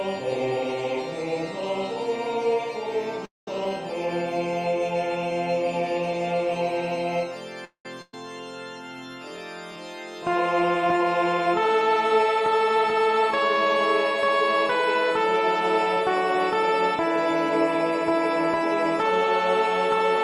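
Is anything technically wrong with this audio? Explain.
Yes, the audio has several network-playback faults.

Call audio freeze at 3.25–3.48 s and 7.65–7.86 s: delayed packets likely emptied the jitter buffer. The last sound stretches into a fading buzz or hiss, then about 170 ms and 100 ms of silence. Nothing is lost, but the pauses are inserted.

Skip ahead at 3.64 s: with later audio already queued, roughly 70 ms was dropped, so playback jumps forward with an almost seamless join.

Jitter buffer slow-down at 3.69–4.52 s (95% speed, 51 ms added) and 9.28–11.49 s (94%, 138 ms added): repeated pitch periods rebuild the buffer reserve, so the sound is drawn out at unchanged pitch.

Burst of packet loss at 8.02–8.14 s: lost packets are bridged for 112 ms by a held, decaying continuation, then playback resumes 250 ms further on with the middle gone.

Jitter buffer speed-up at 11.96–13.66 s (106%) and 15.96–18.11 s (104%): excess buffered audio is trimmed by removing short pitch-period slices, roughly 100 ms each time, so the sound runs faster at the same pitch, sounding hurried in the first.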